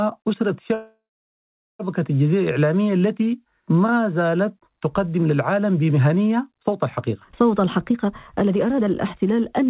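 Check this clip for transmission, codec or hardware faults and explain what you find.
Two faults are audible in this speech clip, which is band-limited to 4 kHz by the call codec.

From 0.74 to 1.81 s there is a call audio freeze. The sound trails into a fading buzz or hiss, falls silent for about 0.79 s, then resumes where it stopped. Packets were likely delayed and the jitter buffer ran empty, inserting about 1.05 s. On a spectrogram, smeared bands fade into a blank column, and the waveform flattens to a line.

From 7.61 to 9.68 s a jitter buffer speed-up makes the speech run at 122% speed, hurried but at unchanged pitch. The receiver cut many pitch-period slices, about half a second in all, to reduce excess delay. The spectrogram keeps harmonic heights but compresses syllables in time, and the waveform's syllable envelopes bunch closer together.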